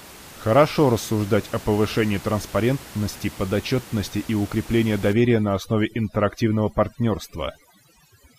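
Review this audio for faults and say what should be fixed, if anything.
From 5.13 s to the end at 8.39 s there is overdone noise removal. Bands near the noise estimate are cut hard. Quiet parts of the speech go with them. The room noise drops and breaks up into twinkling specks. A gentler reduction setting would prevent this.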